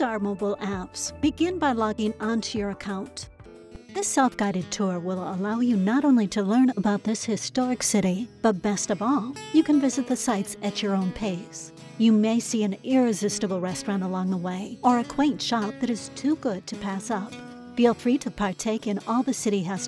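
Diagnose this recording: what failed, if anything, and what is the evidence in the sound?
Nothing failed in this recording; the sound gives no evidence of any fault.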